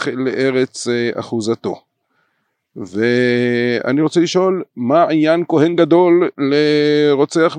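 No technical faults can be heard anywhere in the recording.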